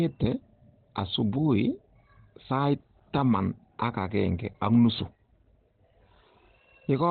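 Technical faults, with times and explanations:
Throughout, Opus compression: the speech sounds muffled and hoarse, with heavy damage across the whole clip and nothing at all above about 4.3 kHz, so sibilants and breath detail are gone and the tone is thin, like a telephone line. This is likely Opus running in its speech-oriented SILK mode at narrowband, which fits a low bitrate near 12 kbps. At that rate the encoder discards the upper band entirely and coarsely models the rest, leaving the rough, boxy texture.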